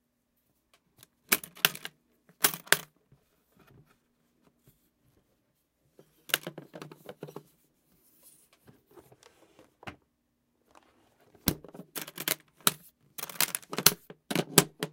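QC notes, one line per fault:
No technical faults are present in the audio.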